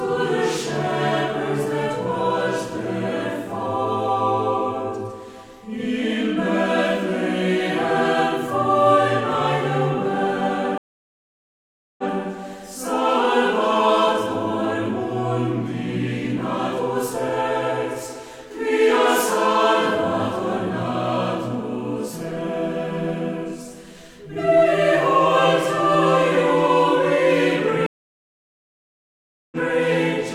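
A stream reconnect at 10.78 s cuts the sound to silence for 1.2 s. When playback returns at 12.12 s, a freshly started decoder picks up about 0.14 s earlier than where it stopped, so that stretch plays twice, as if the server resent a short burst. A second stream reconnect at 27.86 s leaves a longer gap of 1.65 s. This time the audio resumes at 29.57 s roughly 0.4 s later, so that portion is lost.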